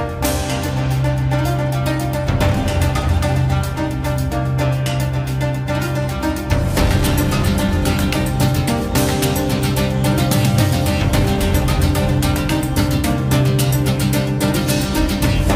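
Nothing goes wrong anywhere in this audio, so there's no fault to point out.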